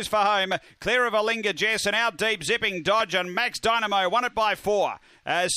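At 1.79 s there's a single sharp click, most likely dropped samples: a fraction of a millisecond goes missing, so the waveform jumps straight to a later value. Nothing audible is lost; you just get that one tick and a thin vertical line across the spectrum.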